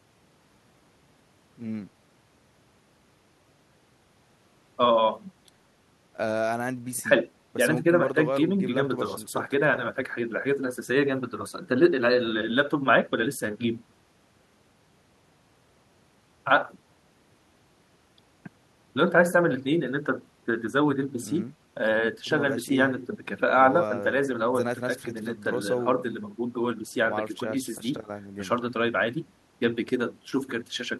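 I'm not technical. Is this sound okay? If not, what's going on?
Yes, this sound is okay, and there's nothing going on that needs fixing.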